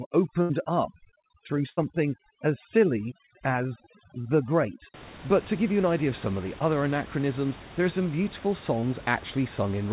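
From the start to about 4.94 s there's overdone noise removal. The room noise sits only about 18 dB under the speech, and the suppressor is clamping down hard on it. It's pushing individual frequency bands almost to nothing whenever they look like noise, and it takes the quieter parts of the voice along with them. So the background drops and breaks up into little twinkling specks, on top of the already narrow band of the call path, which has nothing above 4 kHz.

Inside that stretch there are two bursts of packet loss, at 0.42 to 0.51 s and 1.69 to 1.79 s. Each one loses about 80 ms of audio. The receiver papers over it by stretching the last sound for roughly 70 to 80 ms while fading it down, which gives a held buzz or a dying hiss. Then the audio jumps forward, with the real content in that gap simply gone.

Later on there are three short concealed packet losses. The first is at 4.21 to 4.27 s, covering about 40 ms. 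The second is at 6.59 to 6.62 s, between "of some of the" and "anachronisms there are some", and loses about 20 ms. The third comes at 8.80 to 8.84 s, right after "there are some beautiful", and is also about 20 ms. In each case the decoder fills the hole by continuing the last sound and then blending back into the real audio, so what you hear is a quick smear or wobble. A short consonant can disappear in there.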